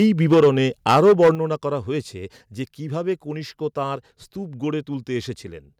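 Right from the start, 0.0 to 0.49 s, the speech has that harsh, crackly edge on its loudest syllables, which sounds like microphone overload. The input was likely set too high, so the peaks ran about 6 dB past the converter's ceiling and got their tops sliced off, a modest fraction of the samples flattened. It comes back worse from 0.86 to 1.3 s, with peaks about 7 dB over and something like one sample in seven clipped, so the crunch is thicker there.

Layered on that, there's a microphone volume stepped down moment at 0.34 s, still inside the first distorted stretch. Voice and background both drop by about 2 dB in one go. A bigger step follows at 1.35 s, just after the second overload and right before "করা হয়েছে যে কীভাবে", where everything falls by about 6 dB, the call software having likely reacted to the clipping by cutting the device's input level.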